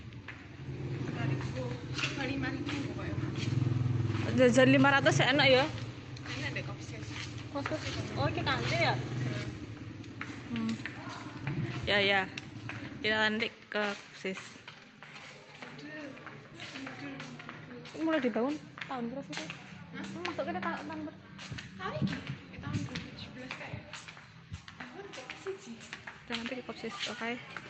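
No technical faults are audible.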